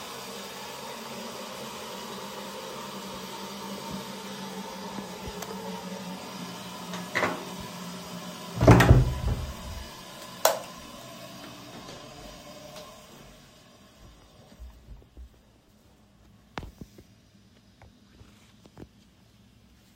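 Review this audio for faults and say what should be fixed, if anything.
Nothing to fix; no faults can be heard anywhere here.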